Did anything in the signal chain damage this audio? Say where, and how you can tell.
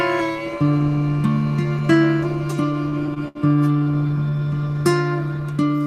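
Yes. Repeated stalls (stutter) at the network stage, from 2.89 to 3.37 s and again from 3.84 to 4.31 s. Late packets drained the jitter buffer. The receiver stretched the last sound through each wait, up to 70 ms. Nothing is lost, but the audio drags and stutters.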